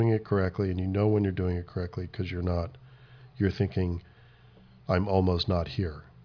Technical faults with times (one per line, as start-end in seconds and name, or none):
none